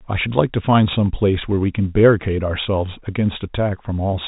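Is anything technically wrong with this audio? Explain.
No, nothing technically wrong can be heard in this speech. It has the narrow, telephone-like sound of G.711 telephone coding, with nothing above about 3.8 kHz.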